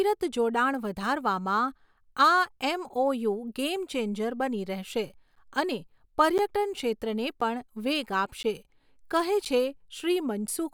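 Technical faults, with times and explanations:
5.35 to 10.48 s: periodic USB or driver dropouts. Every 1.02 s, roughly 10 ms of the speech drops to silence because a background task stalls the USB bus or audio driver on a fixed schedule. The result is evenly spaced ticks cutting through the speech.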